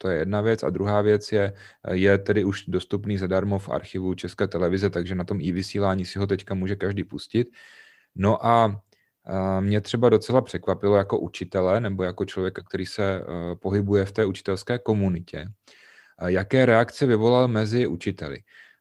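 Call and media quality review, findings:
No transmission or playback faults detected in the speech signal; audio path continuous, level stable, no defects found requiring escalation.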